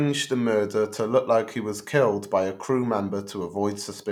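Speech recording, no audible technical faults anywhere in the clip.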